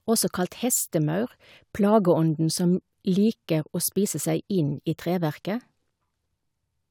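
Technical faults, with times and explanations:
Nothing technical stands out in this speech recording; it's all fine as far as faults go.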